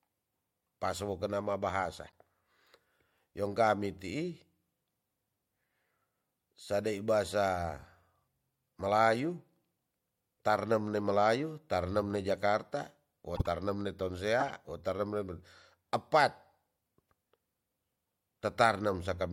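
A faint blip at 2.07 to 2.10 s after "pasowo kena ma", then louder squeaky bursts at 13.36 to 13.47 s after "ne jakarta wo" and at 14.40 to 14.50 s, are corrupt frames decoded: flipped bits in a few compressed frames put energy at wrong frequencies.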